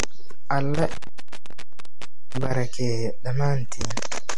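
Intermittent contact from 0.74 s to 2.54 s breaks up this speech recording: a loose connection in the signal path opens, so the sound drops out for a total of about 1.41 s across that stretch, with crackle where the line makes and breaks. MP3 compression runs throughout, and the cause is likely an MP3 encode at a low bitrate, around 57 kbps. The codec damage is plainly audible as watery, swirling texture and smeared attacks, because weak frequency lines were discarded and flicker between frames, and nothing remains above 11.3 kHz, where the encoder cut the treble. DC offset is present throughout: the whole waveform sits shifted away from zero by a constant amount. It cannot be heard directly, but it wastes headroom and shows up as steady energy at the very bottom of the spectrum.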